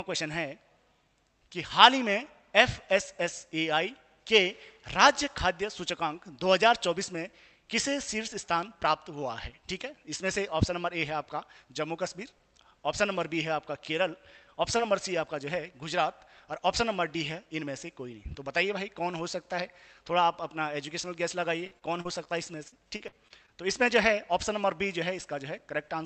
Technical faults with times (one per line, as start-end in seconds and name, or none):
14.77-14.81 short concealed packet loss
21.67-22.28 repeated packet loss (robotic sound)
22.68-23.50 repeated packet loss (robotic sound)